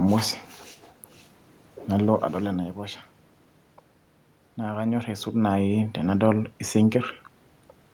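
Nothing in this speech recording stood out as a technical problem on listening; the background room noise and the level shifts around 2 s and 5 s, where the talker moves relative to the microphone, are part of the recorded scene.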